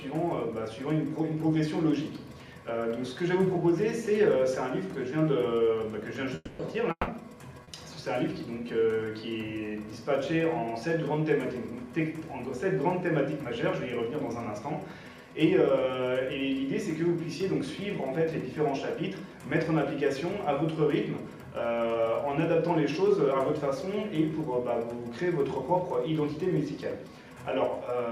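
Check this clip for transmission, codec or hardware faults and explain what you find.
Three transmission faults occur close together, between 6.35 s and 7.70 s.

From 6.35 s to 6.62 s and again from 6.91 s to 7.10 s, the audio turns into a fading continuation of the preceding sound, then briefly goes quiet before resuming further on. This is a long network dropout, likely a stall in packet delivery. The receiver extrapolated for about 240 ms and 160 ms respectively, leaving gaps of roughly 20 ms and 50 ms of silence. The audio lost in those spans never returns.

At 7.63 s to 7.70 s there is a short concealed packet loss. About 40 ms of audio failed to reach the decoder in time, so the receiver synthesised a continuation of the last sound and crossfaded back into the real signal. The result is a brief smear or wobble rather than a clean gap.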